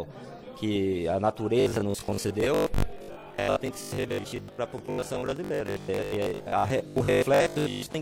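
New audio is likely arriving too seldom from 1.60 s to 8.00 s, so the playback repeats its last short buffer and skips about half the real material, producing robotic sound from repeated short buffers: a rigid, metallic 50 Hz buzz, which fits a 20 ms repeated block.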